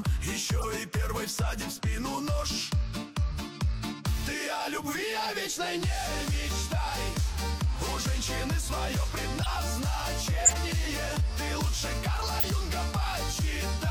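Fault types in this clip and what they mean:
Corrupt frame decoded: five brief chirps and noise bursts cut through the sound at 0.57, 3.31, 9.41, 10.45 and 12.36 s, each lasting roughly 25 to 110 ms. The last two are the loudest, peaking at about -10 dBFS, while the one at 3.31 s is faint. Each burst covers a few compressed frames whose bits were flipped. The decoder played them anyway, so misread values put energy at the wrong frequencies.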